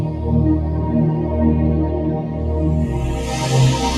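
A noise suppressor tuned for speech stays active across the whole clip, treating held tones and tails as noise, so the sound pumps by around 5 dB.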